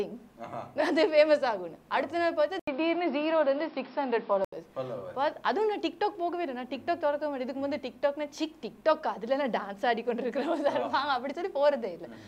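At 2.59 s a brief gap of about 80 ms opens, then the sound turns dull and boxy, with nothing above 5.5 kHz, a level shift of a few decibels and new background noise, until 4.53 s. The likely cause is an input switched to a poorer device.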